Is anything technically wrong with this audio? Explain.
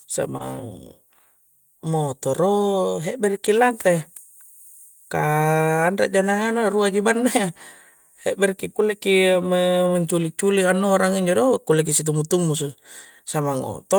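Yes. Two linked faults occur right at the start.

From 0.37 to 0.41 s there is short concealed packet loss. About 20 ms of audio did not reach the decoder in time, and the receiver covered roughly 21 ms by extending the preceding sound, following its pitch where it was voiced and using shaped noise where it was not. The result is a brief smear or wobble. Unlike a hard dropout, there is no silence, only a moment that sounds stretched rather than cut.

Overlapping its end, from 0.39 to 0.41 s, is a lost packet rebuilt from error correction. What sounds like a single lost 20 ms frame was replaced with the low-bitrate redundant copy carried in the next packet. That frame is rougher and grainier than its surroundings. It differs from the concealment just before it because it contains genuine coded content in degraded form rather than an extrapolated continuation, and it ends as the normal stream returns.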